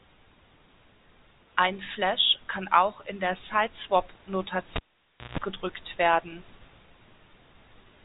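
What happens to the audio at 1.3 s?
Nothing goes wrong at 1.3 s: the speech carries on intact there, heard through the narrow telephone band of G.711 telephone coding with nothing above about 3.8 kHz.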